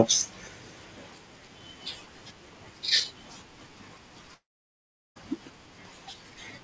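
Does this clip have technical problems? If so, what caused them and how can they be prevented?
Yes. There's a long network dropout from 4.34 to 5.18 s: the sound smears into a fading buzz, then near silence, and resumes with about 0.8 s lost. Packets likely stopped arriving. To prevent it, use a steadier connection, such as wired instead of congested Wi‑Fi, and add FEC or redundancy on the call link.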